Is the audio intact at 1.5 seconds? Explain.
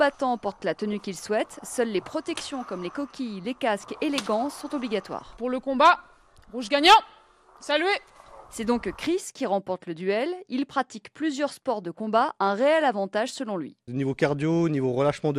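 No, at 1.5 seconds the whole clip sounds dull and gurgly; likely MP2 compression, upper sub-bands switching off and flickering, which fits a rate around 80 kbps.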